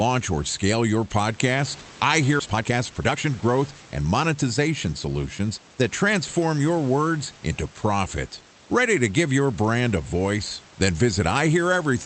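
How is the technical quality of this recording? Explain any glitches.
Two glitches stand out, both at the receiving end of a call: a jump forward in the speech and a stretch of hurried playback right after it.

At 2.39 to 2.41 s, just after "scale your podcast I", there is a skip ahead. Roughly a second of speech is missing, dropped in transit or discarded by an overflowing jitter buffer while later audio was already queued. The two sides are butted together with no silence and nothing filled in. That sets it apart from a dropout, where you would hear a gap or smeared concealment noise. Here the speech simply leaps forward.

From 2.47 to 5.09 s comes a jitter buffer speed-up. With more audio buffered than it wanted, the receiver trimmed many short pitch-period slices in a row, about half a second in total. The speech runs at 122% speed, clearly hurried, yet the pitch does not rise. That is what separates it from a resampling or clock error, which would raise the pitch along with the speed.

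The room noise sits about 22 dB below the speech. The band limit near 8 kHz fits Opus at around 32 kbps.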